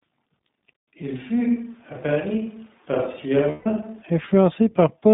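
Throughout, the speech sounds thin, slightly rough and synthetic, confined to roughly 150 Hz to 3.7 kHz. This is iLBC codec damage, consistent with its 15.2 kbps mode using 20 ms frames.

From 1.02 s to 4.03 s the voice turns suddenly roomy and hollow, about 5 dB quieter, with a faint background noise. This is likely a switch to a distant microphone.

Within that stretch, from 3.50 s to 3.67 s, the voice smears into a held, buzzy vowel for 160 ms. Lost iLBC frames, which fits about eight 20 ms packets, were concealed by repeating the last pitch cycle.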